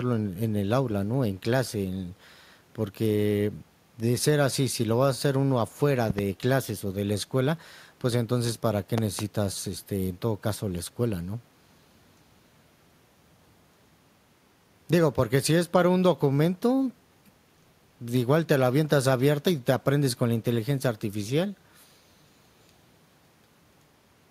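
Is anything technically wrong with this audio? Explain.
Yes. A loud pop occurs twice, at 6.10 to 6.21 s and again at 8.98 to 9.21 s, each time as a pair of sharp pops in quick succession. The likely cause is a sudden electrical pulse, such as from a plug, switch, static discharge or driver glitch, entering the signal path and being shaped by the circuitry that follows. Each pair peaks roughly 10 dB above the speech, which continues underneath.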